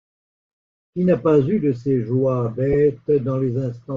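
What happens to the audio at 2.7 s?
Lost LE Audio frames occur from 2.73 to 2.75 s, just after "eu de ces joies". About 15 ms of the stream fails to arrive, which fits two 7.5 ms frames. The LC3 decoder conceals the gap by repeating the last good spectrum with randomised signs. The result is a brief noisy smear in place of the sound: the tonal detail turns to hiss for an instant, then the signal resumes. It is too short for the fade to silence that a longer loss would bring.

Underneath this moment, and across the whole clip, is Bluetooth LC3 compression, likely at around 32 kbps. The codec discards much of the upper spectrum and fills it with synthetic noise, giving the speech a plainly audible breathy, grainy edge.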